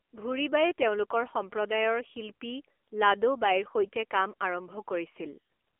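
Throughout, the speech carries AMR narrowband mobile codec damage. The codec only keeps 300 Hz to 3.4 kHz. It rebuilds each short frame from a vocal-tract model driven by a few pulses. The result sounds plainly buzzy and synthetic, which fits a bitrate near 8 kbps.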